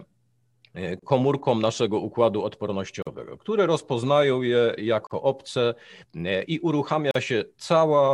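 Gaps at joins of encoded pieces cut the speech at 0.99 s (30 ms), then 3.02, 5.07 and 7.11 s (43 ms each), roughly every 2 s. Encoder delay and end padding at each untrimmed segment boundary leave abrupt silences with smeared edges before the sound resumes.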